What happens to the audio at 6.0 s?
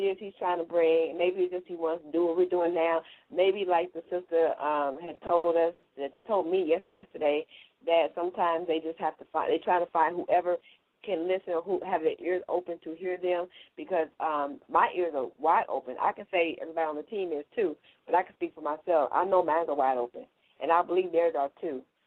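At 6.0 s you're inside a stretch of repeated stalls (stutter), 4.93 to 6.27 s: the jitter buffer kept starving, so seven short gaps got papered over, the longest 120 ms, making it drag and stutter.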